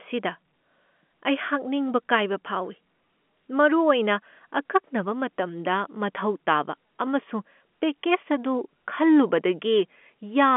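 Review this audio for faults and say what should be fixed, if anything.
Nothing here needs fixing: the speech comes over a G.711 telephone line, so it sits in the usual 200 Hz to 3.4 kHz band with nothing above about 3.7 kHz, and that narrow range is just how the phone path carries sound.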